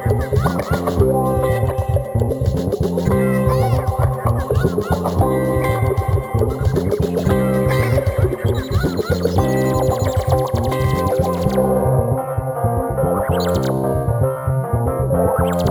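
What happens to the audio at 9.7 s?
A bright metallic fizz, about 30 dB below the sound, is present at 9.7 s as throughout. This is imaging from sample-and-hold upsampling: 22 kHz audio, raised to 44.1 kHz by repeating samples, mirrors into 11 to 22 kHz.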